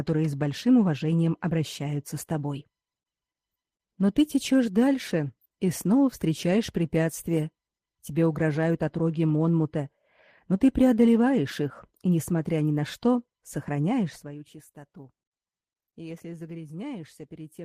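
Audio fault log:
No faults heard.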